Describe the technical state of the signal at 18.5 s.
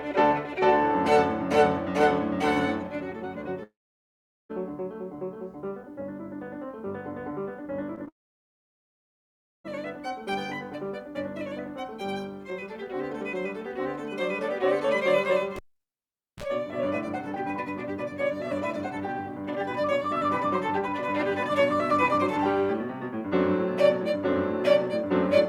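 At 18.5 s the music plays through intact, with no dropout, click, distortion or other fault in the signal at that point.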